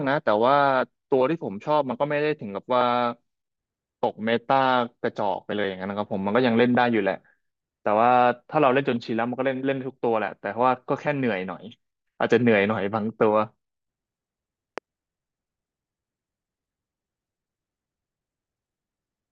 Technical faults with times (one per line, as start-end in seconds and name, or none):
14.78-14.80 loud pop